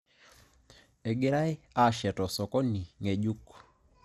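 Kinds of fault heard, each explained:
MP2 compression: The speech sounds dull, with a gurgling, granular roughness throughout and nothing above about 13.7 kHz. The likely cause is MPEG Layer II coding at a low rate, around 80 kbps, starving the upper sub-bands and coarsely quantising the rest.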